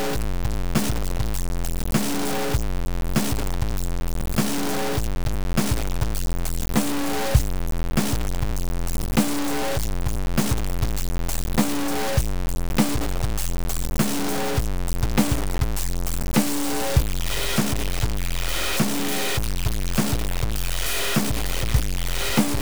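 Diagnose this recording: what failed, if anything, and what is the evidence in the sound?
Sample-format conversion stage: the music is grainy and gritty from start to finish, with distortion about as loud as the music, likely low bit depth without dither, roughly 4 bits, truncated.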